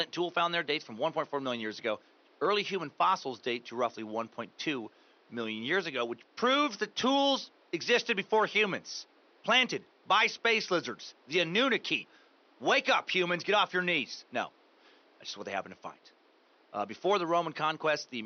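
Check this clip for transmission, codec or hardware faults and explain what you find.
No transmission, codec or hardware fault turns up in this speech clip, and the only thing beneath the speech is the room's own background noise, sitting about 34 dB below it.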